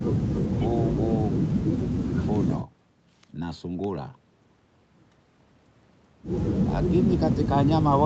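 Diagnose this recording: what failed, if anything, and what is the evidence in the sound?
Nothing failed here: the speech comes across as an ordinary call recording, with the top end stopping at around 8 kHz, which is just the normal bandwidth of the call's microphone processing and Opus codec path.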